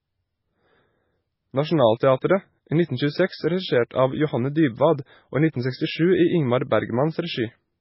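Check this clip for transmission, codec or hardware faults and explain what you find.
One fault runs through the whole clip, from start to finish: heavy MP3 compression damage. Nothing is audible above 5.6 kHz. Within the remaining band, weak frequency components switch on and off between frames, so the speech sounds watery and swirling, with smeared onsets. The likely cause is an encoder starved of bits, consistent with a rate around 16 kbps. A plain low-pass filter would also remove the treble, but the band below the cut would stay steady rather than churning like this.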